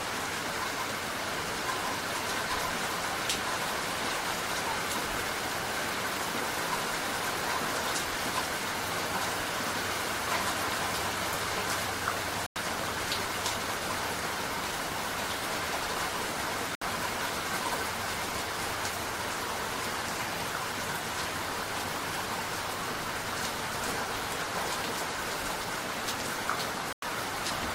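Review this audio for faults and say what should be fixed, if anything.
Digital broadcast dropouts occur at 12.46 to 12.56 s, 16.75 to 16.82 s and 26.93 to 27.03 s. The sound cuts to silence for about 96 ms, 64 ms and 96 ms, then resumes further on. These lengths fit the receiver losing two or three consecutive frames of roughly 32 ms each, either to weak signal or failed checksums, and muting until clean frames return. Whatever was broadcast during those gaps is gone. To prevent this, improve reception with better antenna placement or signal strength, or record from a more reliable source such as a wired stream.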